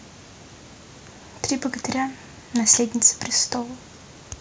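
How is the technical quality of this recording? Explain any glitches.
The technical quality of this recording holds up, with no glitches to explain.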